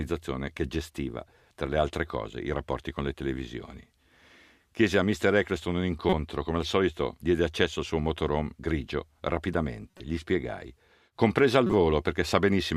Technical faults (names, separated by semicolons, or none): corrupt frame decoded